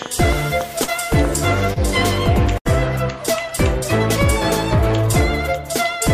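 From 0.02 to 1.26 s a train of clicks runs over the sound: about seven sharp, similar pulses at roughly 4 per second, spaced irregularly and standing well above the audio. Interference from nearby equipment or a faulty connection is the likely source.

Within that stretch, at 0.83 to 0.90 s, a short concealed packet loss replaces about 40 ms with a continuation of the preceding sound, heard as a brief smear. A second, at 1.74 to 1.78 s, patches about 20 ms and gives a wobble.

At 2.58 to 2.67 s a burst of packet loss leaves about 80 ms undelivered. The receiver extends the last sound for roughly 74 ms while fading it, producing a held, decaying buzz or hiss before playback resumes with that segment gone.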